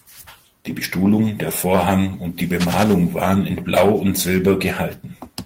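Cable scratch noise runs through this speech clip from 2.60 to 2.94 s, a dense, uneven burst of scratching and rustling laid over the sound at roughly 10 dB below it. It likely comes from a worn cable, connector or control being moved, its contact resistance flickering rapidly.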